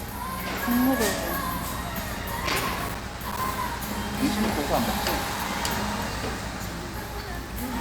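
From 2.47 to 3.57 s, a burst of loose connector crackle breaks in. A worn or dirty contact is making and breaking as it moves. The signal chops on and off, with scratchy crackle. It returns, shorter, from 5.16 to 5.60 s.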